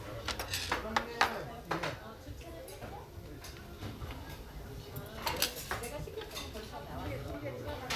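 Listening to this recording of everyday sounds, nothing technical stood out.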